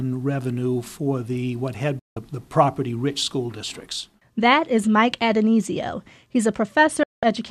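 At 1.99 s the speech cuts out in a digital broadcast dropout. The receiver stopped getting valid frames and muted for about 170 ms, with a 3 ms fade, before resuming at 2.17 s. A second dropout runs from 7.03 to 7.23 s, lasting about 190 ms. Both spans suggest runs of lost frames of roughly 24 ms each, and the audio sent during them is gone. The waveform drops abruptly to a flat line, and the spectrogram shows a clean full-band blank gap.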